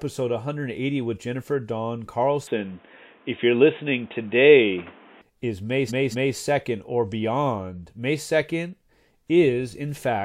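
At 2.47 s the speech suddenly turns dull and boxy. Nothing above 3.7 kHz gets through, and the level shifts by a few decibels. A faint new noise floor sits well below the speech. There is no gap at the change. At 5.22 s the full bandwidth returns. This is likely an input switched to a poorer device, such as a headset in its call profile, and then switched back.

From 5.88 s to 6.34 s the audio stutters. A 232.2 ms block plays two extra times. This is repeated frames: the same compressed data was decoded again instead of new data. The length fits a run of about five frames. The stretch adds 464.4 ms to the recording.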